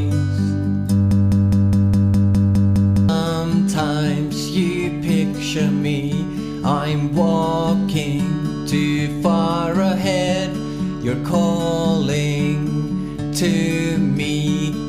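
From 1.11 to 3.09 s, a broken-record loop repeats one 206 ms fragment ten times, exact and undecaying unlike echo, likely from a stalled player, replacing the missing audio.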